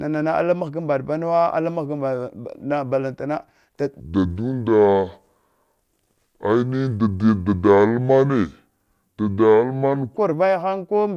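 At 4.00 s the speech suddenly drops in pitch and slows down, and it stays that way until 10.17 s. This is a wrong sample rate fault. The samples are played back at a lower rate than they were recorded at, with no conversion. Everything runs at 0.667 times normal speed, and the pitch falls by 7.02 semitones. The voice sounds deep and dragging. The ratio fits 48 kHz material played at 32 kHz.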